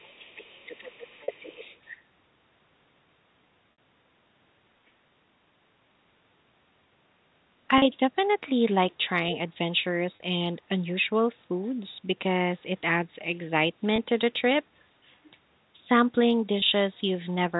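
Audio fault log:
0.00–1.98 s: other side's voice leaking through. A second, fainter voice sits about 20 dB under the talker, likely residual echo the canceller failed to remove from the loudspeaker path. A spectrogram shows a separate, weaker harmonic pattern interleaved with the main one.
11.64 s and 14.78 s: other side's voice leaking through. Brief scraps, each around 40–50 ms and about 40 dB down, likely echo leaking past the canceller. They come through as faint scraps of another voice and appear as thin, barely visible smudges in the waveform.
1.24 s, 3.72 s, 7.78 s, 10.16 s, 13.96 s, 16.6 s: packet loss with pitch repetition. Gaps of 40, 60, 40, 40, 20 and 20 ms, which fit one to three lost 20 ms packets, are filled by repeating the last pitch cycle. The shorter ones sound like a short buzzy hold, while the 60 ms gap fades into silence before the speech cross-fades back in. On a spectrogram it shows as frozen, perfectly flat harmonics.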